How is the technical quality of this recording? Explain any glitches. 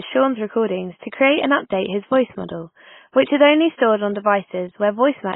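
The recording's technical quality is poor. The speech sounds dull, muffled and smeared from start to finish.

Throughout, there is transcoding between lossy codecs, likely a very low-bitrate AAC encode later re-encoded as WMA. The first codec's 3.7 kHz cut-off survives, and the second codec adds its own artefacts on top of the existing ones. A spectrogram shows a hard ceiling at 3.7 kHz above blotchy, smeared patches.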